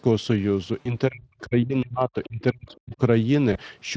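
At 0.81 s comes the first VoIP packet loss concealed by the speech codec. About 40 ms of audio, two 20 ms frames' worth, never arrived, so the decoder extended its last pitch and spectral envelope with falling gain. The result is a short buzzy, smeared stretch that fades, with the sound staying weak until about 0.96 s as the decoder's state recovers. On a spectrogram, harmonics run on as flat horizontal lines while the signal dims, and the waveform envelope decays smoothly rather than stopping.

From 1.09 s to 3.0 s, the talker's level repeatedly sinks and breaks up, with dips adding up to about one and a half seconds and the deepest falling roughly 40 dB. The likely cause is speech suppressed in double talk: with both parties talking at once, the echo canceller could not separate the talker from loudspeaker echo and attenuated everything. On a waveform the envelope shows abrupt notches. 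On a spectrogram, energy thins out in patchy columns across the band, which tops out at 8 kHz.

Within that stretch, from 2.68 s to 2.74 s, a faint fragment of a second voice surfaces, around 35 dB below the talker. This is likely the other side's voice leaking through, where the echo canceller left residue of the far-end loudspeaker signal in the microphone path. On a spectrogram it appears as a brief, weak harmonic trace that does not match the talker's pitch track. On the waveform it is nearly invisible, a low-level ripple.

At 3.53 s a second, shorter packet loss occurs: a single 20 ms frame is concealed, giving a brief tonal smear and dip that has settled by 3.58 s. The spectrogram shows a short flattened, held harmonic segment, and the waveform shows a small, smooth envelope sag rather than a gap.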